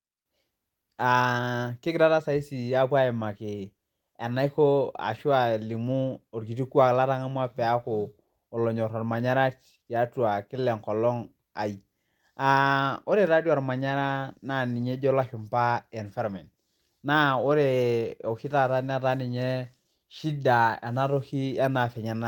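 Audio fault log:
No fault is heard in this speech clip.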